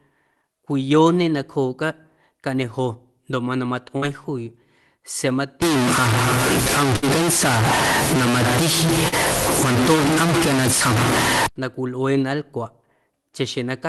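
A speech recording carried over a WebRTC call path, with the Opus coding band ending near 12 kHz on a spectrogram. Short concealed packet loss appears at 0.41–0.45 s and 9.08–9.14 s. Tens of milliseconds never arrived, and the decoder stretched the preceding sound to fill them, leaving a brief smear or wobble where the spectrogram shows repeated, slightly blurred harmonics. A burst of packet loss follows "cañejo ndoꞌ mana" at 3.97–4.04 s and recurs at 6.96–7.04 s. About 60 ms went missing each time, so the last sound is held and fades, visible as a stretched smear sinking in level, before the speech jumps ahead. From 5.62 to 11.46 s, ending just before "na cwilꞌuee", the sound turns coarse and gritty, with the quietest stretches sputtering. This is likely low bit depth without dither, around 3 bits truncated, with the grain about 5 dB louder than the speech. The waveform shows staircase steps, and the spectrogram shows a broadband haze tracking the speech.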